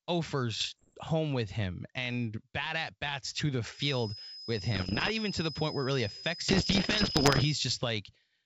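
From 0.60 to 0.99 s, just before "home with him and", the speech breaks into pops and short rough bursts, its level briefly jumping and dropping. These are bit errors on an ADPCM link, at a rate of around one percent. A flipped bit does more than spoil one sample: it knocks the decoder's step size and predictor off track, so each error rings on for a few milliseconds before the decoder recovers.

Right after "at bats to the", at 3.70 s, a thin steady whistle near 5.1 kHz enters, sitting about 10 dB under the speech and swelling and fading slowly in level until 7.63 s. This is a feedback whistle, likely from a loudspeaker-to-microphone loop held just at the edge of feedback, so one frequency keeps sounding without growing into a howl. The G.722 coding on this call passes 5.1 kHz within its roughly 7 kHz bandwidth, so the whistle comes through.

The ADPCM bit errors return under the whistle, from 4.75 to 5.11 s at around two percent, and again from 6.48 to 7.44 s at around three percent. 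Both bursts have the same pops and rough level swings as the first, and they get denser with each return.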